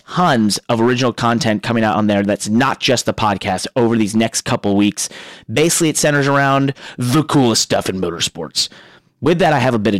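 Hard clipping runs through the whole speech clip: the signal is driven about 8 dB past what a stage can pass, so a few percent of samples hit the ceiling. The waveform shows flat-topped peaks, and the spectrogram shows harmonic smearing at high frequencies, heard as harsh crackle on loud syllables.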